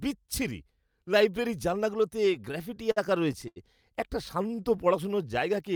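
Right after "বিচ্ছিরি লাইব্রেরীর জানলাগুলোতে", from 2.25 to 3.58 s, repeated stalls (stutter) occur. The jitter buffer ran dry 12 times, with the longest wait 79 ms, and each gap was bridged by stretching the last sound. Unlike dropouts, nothing is lost, so the speech hitches and drags. From 4.42 to 5.57 s, a jitter buffer slow-down repeats single pitch periods to add 125 ms, running speech at 90% speed. Pitch stays unchanged, which separates it from a simple slowed playback.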